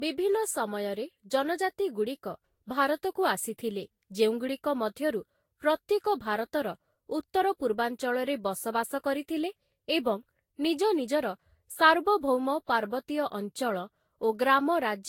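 Generation loss runs through the whole speech clip, which swirls and sounds hollow and smeared, with blurred attacks and nothing above 16.6 kHz. The likely cause is roughly seven lossy encodes, each requantising on a shifted frame grid, in a way that fits Vorbis at around 62 kbit/s.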